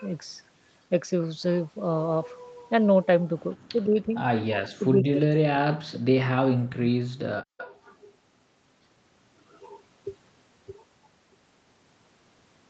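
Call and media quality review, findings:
Speech suppressed in double talk, 3.67–4.15 s, 4.75–5.6 s and 5.82–7.42 s: voice dips hard, up to roughly 40 dB, in chunks. Likely the echo canceller ducking both sides during overlap.

Echo leak, 7.58–7.72 s: a short scrap of delayed voice, 149 ms behind, roughly 20 dB down. Likely the far end's canceller letting loudspeaker pickup through.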